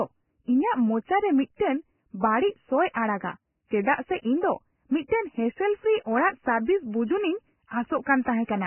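Throughout the speech, nothing is heard above 3 kHz, and the remaining upper band is hissy and grainy, with roughened tones and blurred attacks. This is likely heavy Vorbis compression, fitting a rate near 10 kbps. Unlike a simple low-pass filter, it replaces detail with noise.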